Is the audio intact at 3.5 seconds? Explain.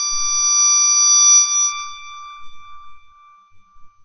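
No. At 3.5 seconds the music, like the rest of the clip, shows MP2 compression damage, likely from a low-rate encode around 48 kbps. Upper sub-bands are switched off, so nothing sounds above 6.5 kHz, and the surviving bands are coarsely quantised, giving a dull, gurgling, granular texture.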